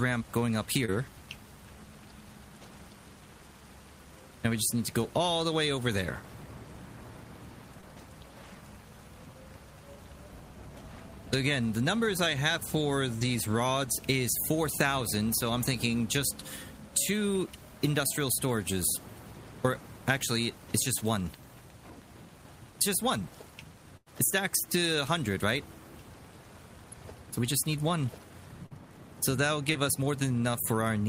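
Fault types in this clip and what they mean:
short concealed packet loss: Brief gaps where about 20 ms of audio failed to arrive in time (about 40 ms near 28.66 s) were patched by the receiver extending the preceding sound and then blending back into the real signal. Each is heard as a tiny smear or wobble at 0.85, 7.81, 13.19, 28.66 and 29.73 s. Unlike a burst, the patch is too short to turn into a held tone or fade.
burst of packet loss: At 23.97 s about 100 ms of audio went missing in one stretch. The receiver filled roughly 95 ms of it by prolonging and gradually lowering the last sound, which gives a held buzz or fading hiss before the audio picks up again further along, with the intervening part gone. Its length is what distinguishes it from the short losses, where only a brief wobble can be heard.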